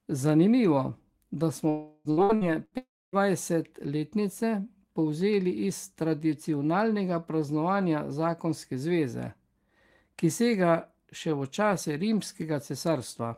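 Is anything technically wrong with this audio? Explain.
Yes, there are network faults early in this speech clip.

Long network dropout, at 1.69 to 2.08 s and again at 2.77 to 3.16 s: likely a stretch of audio that never arrived. The receiver extends the last sound as a fading buzz to hide the loss. The first hole is filled entirely this way. The second fades to about a quarter-second of silence before the speech resumes, with the missing part gone.

Repeated packet loss (robotic sound), at 2.11 to 2.74 s: four separate gaps, the longest 65 ms, are each patched by continuing the previous sound. Concealment covers about 38% of this span, so the speech sounds choppy, with fragments missing.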